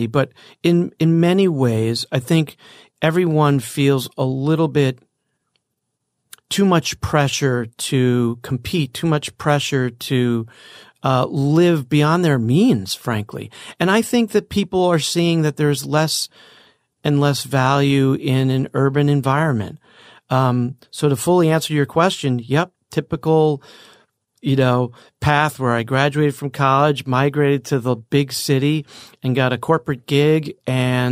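A speech recording. No technical fault can be heard anywhere in it.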